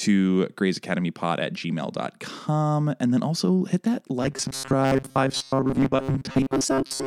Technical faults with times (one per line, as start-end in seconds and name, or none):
4.22-7.07 robotic sound from repeated short buffers